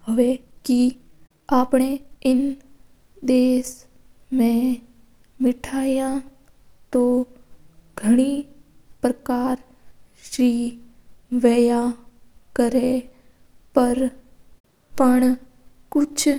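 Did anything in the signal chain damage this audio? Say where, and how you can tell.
Yes. From 0.00 to 2.36 s, a time-stretched section runs 1.48 times fast, rushed yet unshifted in pitch. Software processing likely dropped short pieces. A sample-rate error would raise the pitch.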